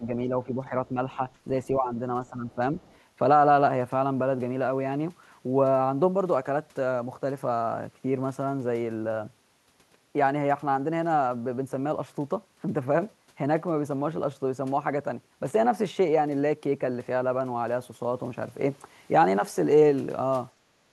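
The first three seconds have the talker ducking repeatedly: from 0.0 to 0.97 s, briefly at 1.16 s, then 1.7 to 2.01 s and 2.21 to 2.81 s. The early dips are shallow, around 5 dB, and the later two go deeper, about 10 dB. It sounds like the voice being pushed back and thinned in patches. That's speech suppressed in double talk, likely because the echo canceller couldn't tell the near talker from the far side playing at the same time and turned everything down together.

Right after that, from 2.81 to 2.99 s, a faint scrap of the other side's voice leaks through. It sits very low, roughly 35 dB under the speech. The likely cause is echo cancellation that didn't fully subtract the loudspeaker signal picked up by the mic, so a residue of the far end slips into the send path.

Near the very end there's background gated by the echo canceller. From 20.55 to 20.68 s the room tone drops by about 11 dB, and from 20.84 to 20.92 s it drops by about 15 dB. 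You hear the ambience briefly hollow out and then come back. The canceller clamps the microphone hard while it thinks the loudspeaker is active, and releases afterwards, so the floor pumps rather than staying steady.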